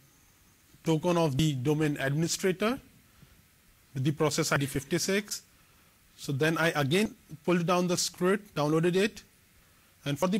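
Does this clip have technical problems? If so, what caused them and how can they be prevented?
Yes. There's damaged data in the compressed stream: short glitches at 1.39, 4.56 and 7.06 s, plus a much longer one from 10.19 to 10.23 s. Each time, corrupted bytes in the encoded file threw the decoder off. It misread the bad frames, lost sync and had to hunt for the next valid frame header, which is what you hear as those glitches. To prevent it, transfer and store files with checksums and re-fetch any segment that fails verification.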